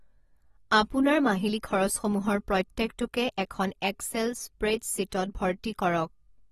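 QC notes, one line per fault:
Throughout, AAC compression: the speech was likely passed through a low-bitrate AAC-LC encoder, which fits a rate of roughly 36 kbps. Short of bits, the encoder quantised the spectrum coarsely and discarded everything above 13.7 kHz. Nothing sits above that line, so the top end sounds dull and the consonants lose their air. The coarse quantisation also leaves plainly audible smearing, with a fizzy, warbling texture on sibilants and held vowels.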